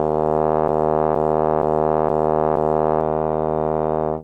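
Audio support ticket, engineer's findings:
Broken-record loop, 0.68–3.01 s: a 0.47 s fragment of the music repeats back to back five times, and the intervening audio is lost. Likely a stalled player or stream re-sending its last buffer.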